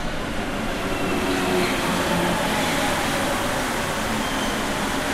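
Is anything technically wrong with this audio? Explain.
No, this recording of sounds carries no audible technical fault anywhere in the signal.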